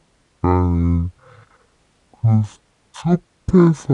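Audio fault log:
throughout, wrong sample rate: the speech plays at half speed and a full octave low, which fits 48 kHz audio played at 24 kHz without conversion. A spectrogram shows harmonics and formants at half their normal frequency and syllables twice as long, and the waveform looks stretched.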